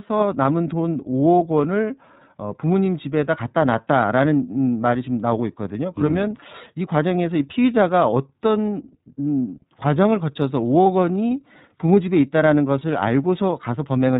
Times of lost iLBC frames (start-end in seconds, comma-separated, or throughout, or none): 10.84-10.86